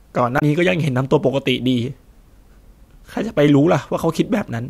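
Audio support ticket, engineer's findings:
Damaged data in the compressed stream, 0.35 to 0.42 s, about 70 ms long. Short glitch over the speech. Probable component: decoder input. Corrupted bytes there, so the decoder misreads those frames, loses sync and hunts for the next valid frame header before picking the speech back up. Worth checking the file or stream integrity upstream of the decoder.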